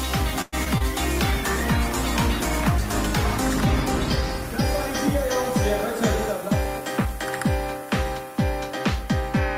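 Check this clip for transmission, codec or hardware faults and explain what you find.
Several transmission faults are audible, all in the first nine seconds.

From 0.41 to 0.55 s there is a call audio freeze. The last sound stretches into a fading buzz for about 0.11 s, likely because delayed packets emptied the jitter buffer.

Short concealed packet loss follows at 0.65 to 0.68 s and 0.78 to 0.82 s. Lost packets were filled by extending the previous sound, leaving brief smears.

A call bitrate drop runs from 1.21 to 7.24 s. The encoder fell from 96 to 19 kbps, lowest for about 3.5 s. The sound turns coarse and muffled.

Jitter buffer speed-up occurs from 6.26 to 7.13 s and 7.74 to 8.71 s. Each time the receiver trimmed pitch periods to cut delay. The audio runs about 4% fast, losing a few hundredths of a second at the same pitch.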